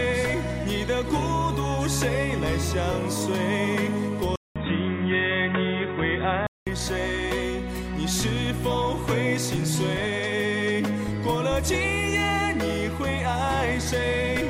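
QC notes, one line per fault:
4.36–6.67 s, input switched to a poorer device: after a 200 ms gap, the sound turns dull and boxy with nothing above 3.8 kHz, a faint new noise floor well below the signal, and unchanged level, likely a switch to a narrower-band microphone before returning.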